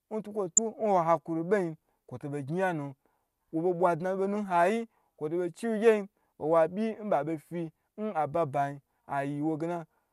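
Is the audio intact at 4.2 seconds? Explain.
Yes, the audio is intact at 4.2 seconds, with no fault audible at that moment.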